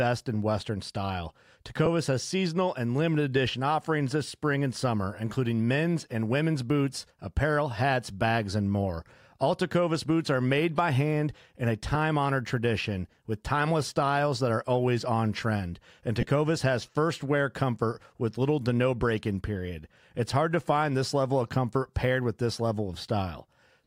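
Lost LE Audio frames cause brief noisy smears at 1.86 s and 11.95 s, each about 7.5 ms. The LC3 decoder fills the gaps by repeating the last spectrum with random signs. From 16.21 to 16.29 s, scattered losses totalling 45 ms produce a longer smear, with the longest run near 15 ms.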